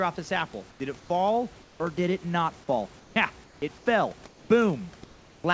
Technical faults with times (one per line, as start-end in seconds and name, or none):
0.70-1.10 comfort noise in place of the background
1.62-1.80 comfort noise in place of the background
3.00-3.16 comfort noise in place of the background
3.44-3.86 comfort noise in place of the background
4.28-4.50 comfort noise in place of the background
5.04-5.44 comfort noise in place of the background